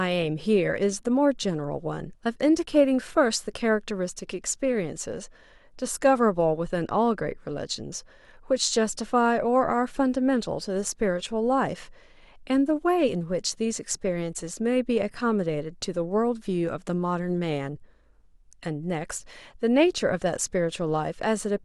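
No technical faults can be heard anywhere in the recording. Nothing in the signal chain calls for comment at any point.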